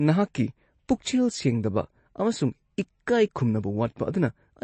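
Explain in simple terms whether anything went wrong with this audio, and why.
The speech sounds noticeably watery and swirly from start to finish, with a metallic, chirpy edge on the hissy consonants, and everything above about 8.3 kHz is simply missing, so it comes across dull and smeared. That's most likely MP3 compression squeezed too hard. Short on data, the encoder chops off the top end and lets quiet detail flicker in and out from one moment to the next, which is where that warbly texture comes from.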